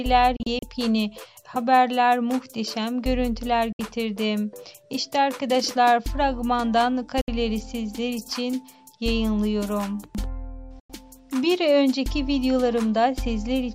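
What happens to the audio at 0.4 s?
A digital broadcast dropout runs from about 0.36 to 0.63 s. The receiver stopped getting decodable frames and muted until valid ones returned, so the audio drops out in several short holes totalling about 96 ms across a 256 ms stretch. The longest gap is 32 ms, and three frames are lost in all. Each mute fades in about 3 ms, so the cuts sound abrupt. On a waveform the gaps are flat, and a spectrogram shows them as narrow, fully blank vertical stripes.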